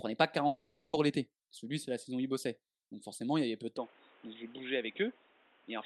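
Speech clip, heard through a call path whose band fits Opus at around 12 kHz. From 0.47 to 0.95 s the sound smears into a fading buzz before resuming further on, likely a long network dropout concealed by extending the last audio. From 3.77 s, just after "y avait peu de", the sound turns dull and boxy with nothing above 3.8 kHz, about 5 dB quieter, with a new noise floor about 30 dB down. This points to the input likely switched to a poorer device.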